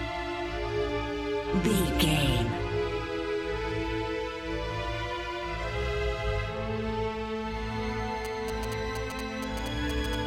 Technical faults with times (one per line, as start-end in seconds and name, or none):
8.25-10.15 GSM signalling bursts